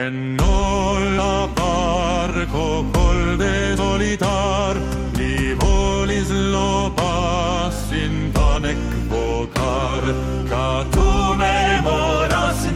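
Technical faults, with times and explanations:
1.17 s, 3.75 to 3.79 s and 8.55 s: damaged data in the compressed stream. Each time the decoder hits corrupted bytes, misreads those frames and loses sync while it hunts for the next valid header, so you get a brief glitch cutting into the sound.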